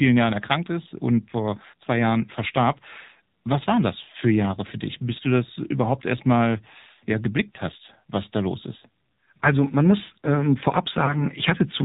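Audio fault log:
throughout AMR narrowband mobile codec: everything above 4 kHz is missing, and the sound is buzzy and synthetic, which fits a low rate near 7.4 kbps. On a spectrogram there is a hard ceiling at 4 kHz.
4.12–4.16 s and 11.06–11.26 s lost AMR speech frames: each time, the decoder replaced one missing 20 ms frame with a fading copy of the last good settings, giving a brief dip or warble. The waveform shows an envelope dip, and the spectrogram shows smeared, repeated harmonics.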